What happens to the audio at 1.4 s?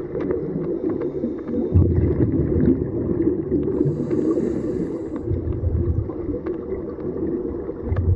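At 1.37 s there is a brief blip from damaged data in the compressed stream. The decoder misread the corrupted frame and lost sync for a moment. Around it, plainly audible coding damage is likely from MP3 compression, and its degradation fits a rate near 64 kbps.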